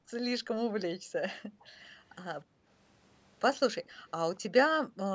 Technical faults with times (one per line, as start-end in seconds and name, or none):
0.00-0.11 background gated by the echo canceller
0.94-1.13 background gated by the echo canceller
1.41-1.73 background gated by the echo canceller
2.45-2.67 background gated by the echo canceller
4.36-4.40 echo leak
4.86-4.98 background gated by the echo canceller